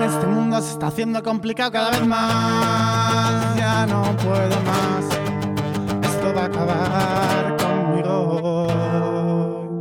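No technical faults can be heard in this clip.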